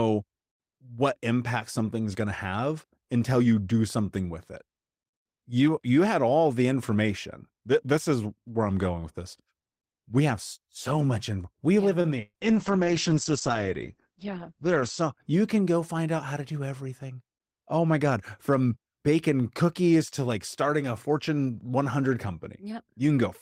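Speech, with three network faults packed into about three seconds. Right after "in we yeah live", from 12.01 to 12.07 s, there is a short stall from a late packet. A packet arrived after its playout time, so the jitter buffer ran dry and the receiver held the last sound for about 29 ms before picking up where it left off. Nothing is lost, but the total delay grows by 29 ms. On a spectrogram the harmonics run flat and unchanging for that stretch, and the waveform shows a brief repeated cycle. Soon after, from 12.22 to 12.37 s, comes a burst of packet loss. Packets went missing in a row, and about 120 ms of audio never arrived. Concealment filled roughly 116 ms by extending the last sound while fading it down, and about 20 ms at the end is silent. When the audio resumes it has jumped ahead past the missing part. A spectrogram shows a smeared, steady band that thins to a blank slot, then an abrupt restart. 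The waveform decays and then shows a flat line. From 12.43 to 15.23 s there is a call bitrate drop. The bandwidth estimate fell, and the encoder went from 32 to 9 kbps, staying at the lowest rate for about 2.5 s. The coarser coding makes the speech sound rough and watery, and the audio bandwidth shrinks from 20 kHz to 8 kHz, so it also sounds muffled. On a spectrogram, energy above 8 kHz abruptly disappears across that span, and the detail below it looks blotchy and smeared until the rate recovers.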